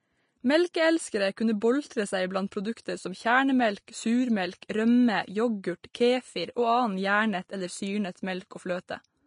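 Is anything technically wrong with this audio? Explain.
Yes. Throughout the speech there is hissy, grainy treble with nothing above 10.5 kHz, likely Vorbis compression at a low setting, around 33 kbps. The treble is quantised so coarsely that its detail turns into noise of similar energy, and attacks blur. A plain low-pass filter would only dull the sound, not make it grainy.

Pre-echo occurs at 1.36 s before "kunne boltre seg blant", at 1.61 s before "boltre seg blant produkter", at 4.61 s, and at 5.83 s before "kefir og". Each time a sharp onset lands late in a transform block, and the block's noise spreads back about 10 to 12 ms into the quiet before it. Unlike a click, this is a brief hiss that comes before the attack and softens it.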